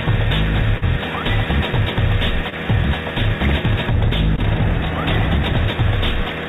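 From the first moment to the end, a faint hiss and roughness rides on the sound, growing on loud and bright passages and dropping away in quiet. This is sample clock jitter: a few microseconds of random timing error in the converter's clock, leaving an error floor roughly 35 dB below the signal. The band-limited call sound, which stops at 4 kHz as a G.711-style path would, keeps that hiss confined to its narrow range.

At 0.78 s a brief smear and wobble runs to about 0.84 s, followed by similar but shorter blips at 2.50 to 2.54 s and 4.36 to 4.40 s. Each is a short concealed packet loss. Some 40, 20 and 20 ms of audio never arrived, so the receiver extended the preceding sound for about 37, 22 and 16 ms before blending back into the real signal.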